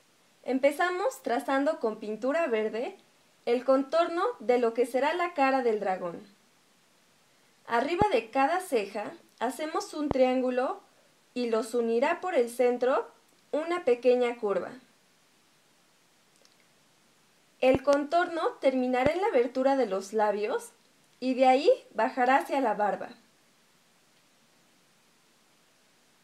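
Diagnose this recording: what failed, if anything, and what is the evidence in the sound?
You've got loud pops here, four events in all: 8.02–8.04 s, 10.11–10.13 s, a double pop spread over 17.75–17.95 s, and 19.06–19.09 s. Each one jumps to roughly 15 to 20 dB above the surrounding sound, and the sound keeps going underneath. The likely culprit is the analogue wiring stage, where a crackly connector, switch or static discharge injects a sudden voltage step that the downstream circuits shape into a sharp thump.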